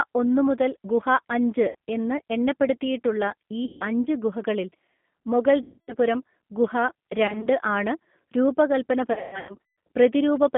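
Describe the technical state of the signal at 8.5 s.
At 8.5 s the speech carries G.729 codec damage, present across the whole clip. The 8 kbit/s coder rebuilds the voice from a vocal tract filter, a pitch predictor and sparse pulses, so it sounds plainly rough and synthetic, confined to about 150 Hz to 3.5 kHz.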